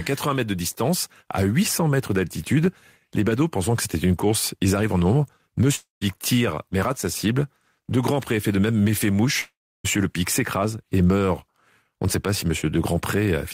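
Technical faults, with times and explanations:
5.75–6.03 s, long network dropout: after "ils arrivent en nombre", sound thins to a fading buzz, then 150 ms of silence before "tire mais rate sa". Likely lost packets; the waveform shows a decaying tail, then a flat gap.
9.41–9.86 s, long network dropout: about 440 ms missing, with a brief fading hiss and 320 ms of silence. Likely lost packets; the spectrogram shows a smeared tail, then a blank band.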